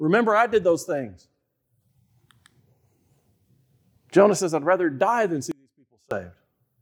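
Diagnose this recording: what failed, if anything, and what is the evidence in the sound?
Audio dropout to a faint residue at 5.52–6.11 s, after "I'd rather die than": speech falls abruptly to a trace about 30 dB down, likely an analogue wiring break with the path still live.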